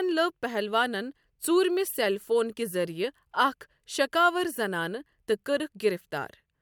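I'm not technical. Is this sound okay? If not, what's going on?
Yes, this sound is okay, and there's nothing going on with it that needs fixing.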